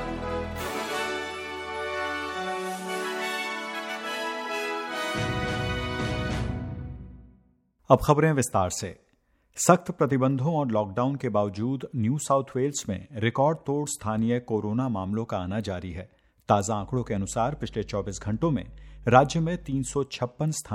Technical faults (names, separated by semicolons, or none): mains hum